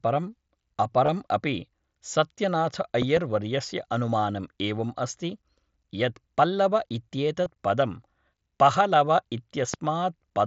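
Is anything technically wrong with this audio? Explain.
Yes. Concealed Bluetooth headset packet loss occurs at 1.06 to 1.08 s and again at 7.44 s. Packets from the headset were dropped, and the receiver bridged each gap by repeating a close-matching recent stretch of waveform. This produces a brief buzzy patch of 22.5 ms and 15 ms, which fits about three and two lost frames, then a slight warble as real speech resumes through the mSBC link.

A loud pop appears as a pair from 3.02 to 3.19 s, peaking about 10 dB above the speech, and as a single pop at 9.74 to 9.76 s, about 15 dB above it. These are sharp transient thumps, likely from a voltage spike such as static or a connection glitch, sitting on top of speech that continues underneath.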